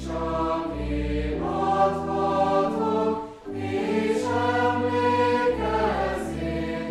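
Nothing goes wrong anywhere in this audio, so there's no fault to point to at any moment.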